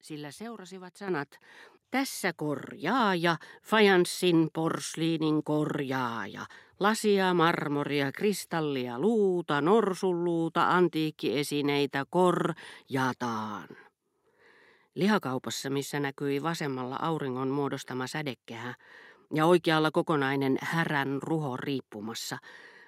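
At 1.08 s the microphone volume steps up by about 8 dB, then again at 3.0 s by about 4 dB. The call software is raising the input gain in one jump each time, so the voice and the background both lurch louder together.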